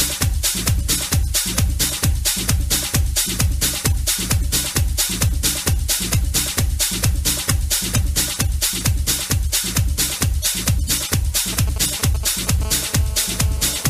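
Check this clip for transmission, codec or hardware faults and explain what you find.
Two related hardware faults, both from a nearby 2G phone, appear at the end of the clip.

GSM signalling bursts, 11.53 to 12.64 s: a phone close to the audio circuit is exchanging short control transmissions with the network, and the circuit rectifies each radio burst into an audible pulse. Because the phone transmits only in brief groups, the result is a galloping dit-dit-dit of short buzzes, pulsing at about 217 Hz, sitting roughly 15 dB below the audio.

GSM phone buzz, 12.65 to 13.85 s: the phone has moved into a call and now transmits continuously in bursts at about 217 Hz. The circuit again demodulates those pulses, and they arrive as a steady, hard, raspy buzz at 217 Hz with a dense stack of harmonics, about 20 dB below the audio. The buzz has no relation to the recorded sound and continues until the clip ends.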